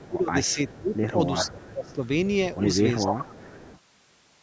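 Speech suppressed in double talk from 0.0 to 1.07 s, 1.51 to 2.02 s and 3.04 to 3.56 s: the speech dips sharply, by about 20 to 25 dB at its deepest. The likely cause is an echo canceller that couldn't tell its own talker from loudspeaker echo while both sides spoke, so it turned everything down.

Echo leak from 0.5 to 0.99 s, 1.37 to 1.94 s, 3.01 to 3.05 s and 3.37 to 3.8 s: a copy of the speech returns 391 ms late. It is faint in the first and last stretches, stronger in the brief one near 3.0 s, and nearly as loud as the speech itself around 1.4 to 1.9 s. This likely comes from a loudspeaker on one end whose echo canceller failed to remove what its microphone picked up.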